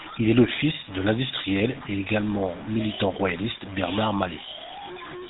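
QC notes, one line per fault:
Throughout: low bit depth without dither. There's a grainy, crunchy distortion riding on the speech that moves with it, loudest relative to the signal in soft passages; overall the grit sits only about 15 dB below the voice. Quiet tails break up or drop to silence instead of fading smoothly. That's the signature of samples likely truncated to a very coarse grid, something like 5 bits, with no dither, so the rounding error tracks the waveform instead of becoming a steady hiss.
Throughout: GSM full-rate codec. The voice has that buzzy, gravelly phone-line texture, and the top end stops dead at 3.8 kHz, so sibilants are dull and everything sounds boxed in. The codec models the vocal tract and rebuilds the excitation from a sparse, regularly spaced pulse train, which gives the rasp you can plainly hear here. The overall character fits a 13 kbps GSM full-rate encode.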